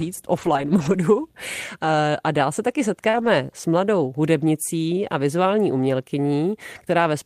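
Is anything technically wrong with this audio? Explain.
Yes. The speech has two kinds of network fault.

From 0.33 to 0.99 s there is lost packet rebuilt from error correction. Several separate packets went missing, about 340 ms of audio in total. Each following packet carried a low-bitrate backup copy of the lost one. The decoder played those copies instead, so nothing drops out. The rebuilt stretches sound rougher and noisier than the surrounding speech. The same thing happens again from 3.14 to 3.28 s, covering about 80 ms.

From 3.09 to 3.16 s there is short concealed packet loss. About 40 ms of audio never arrived in time, and no backup copy was available. The receiver filled the hole itself by extending the last sound it had, then blended back into the real signal. It comes across as a brief smear or wobble. It runs straight into the second rebuilt section.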